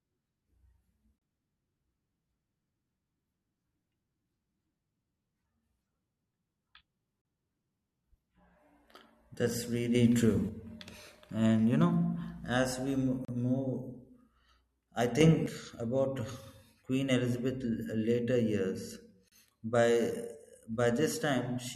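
At 1.18 s the speech breaks for about 31 ms, then again at 7.22, 13.25 and 19.28 s for about 34 ms each. These are gaps at a join of encoded pieces: separately encoded segments were butted together untrimmed, so encoder start delay and end padding survive as silence. The strict 6 s spacing and the way the audio resumes exactly where it stopped separate these gaps from random dropouts.

From 9.95 to 10.49 s, and again from 15.21 to 15.46 s, the level leaps by about 7 dB at once, likely a sudden gain jump from an unramped digital gain change. Unlike a compressor or fade, the background noise rises in the same instant as the speech.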